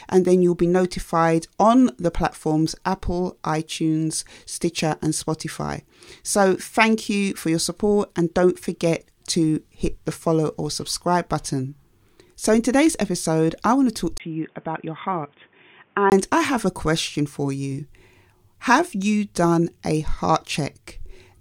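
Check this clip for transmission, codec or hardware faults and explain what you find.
One fault is present. From 14.18 to 16.12 s, after a 20 ms gap, the speech turns dull and about 5 dB quieter, with nothing above 3.6 kHz. The input was likely switched to a poorer device.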